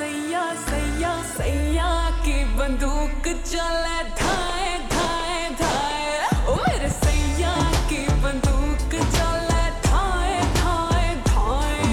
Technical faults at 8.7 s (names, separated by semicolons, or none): none